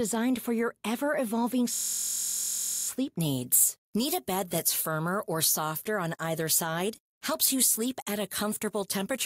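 Right from the start there's gain pumping: the speech level breathes by about 5 dB, likely from gain set too hot feeding a fast limiter. From 1.74 to 2.88 s a system hang loop kicks in: one 23.2 ms slice repeats 49 times, making a steady buzz at 43.1 Hz, which fits a 1024-sample buffer. Then from 3.20 s to the end, pre-emphasis is left on. The treble sits about 13 dB hot at 10 kHz, matching a 75 µs FM curve with no de-emphasis, so everything turns thin, bright and hissy.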